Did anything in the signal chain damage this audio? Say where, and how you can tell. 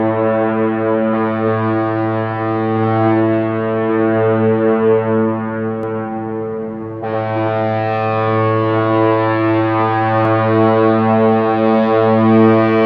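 Yes. A second, slower capture path or routing was likely mixed in, causing a doubled audio track from 5.83 to 10.25 s. An equally loud, full-band copy trails by roughly a tenth of a second, with no decay or room colour, and starts and stops abruptly.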